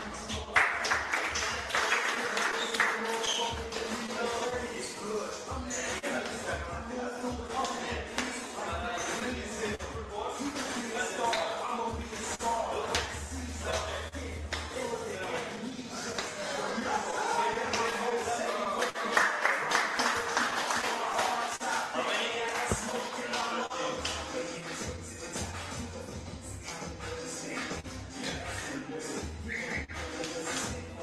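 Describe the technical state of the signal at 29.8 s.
At 29.84 s a short stall from a late packet occurs: the jitter buffer ran empty, so the receiver held the last sound for 43 ms before resuming where it left off, with nothing lost. This sits within repeated timing corrections running from 0.12 to 30.87 s, where the receiver keeps repeating small pieces, slowing playback to about 99% and adding roughly a fifth of a second in total. Both come from clock drift between sender and receiver, with the sender's clock running about 3% slow, so the buffer keeps draining. The audio passes through an Opus call path, band-limited to about 12 kHz.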